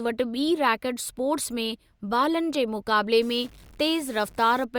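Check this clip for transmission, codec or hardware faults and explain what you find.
One hardware-type fault is present: a stuck bit from 3.22 s to 4.64 s. Over that stretch the speech takes on distortion, and the gaps between syllables fill with noise instead of falling quiet. The likely cause is a data line or converter bit held permanently at 0 or 1. About half the samples are then offset by that bit's weight, in a pattern that follows the waveform. Because the error flips with the sign of small values, silence turns into noise.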